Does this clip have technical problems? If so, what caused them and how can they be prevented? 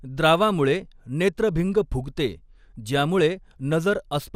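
Yes, the speech sounds dull and gurgly throughout, likely from MP2 compression at a low bitrate around 80 kbps, where upper sub-bands drop out and the rest get coarsely quantised. Encode at a higher bitrate or use a more efficient codec.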